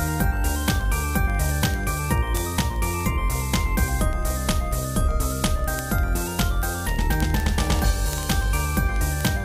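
From 0.13 s to 9.40 s the audio carries word clock ticks: a steady run of about two hundred clicks, roughly one every 50 ms. The receiving device runs on its own clock, drifting from the sender's by something like 500 ppm, so each time the clocks slide one sample apart, a single sample is dropped or repeated. A spectrogram shows evenly spaced thin vertical lines; the waveform shows a tiny step at each slip.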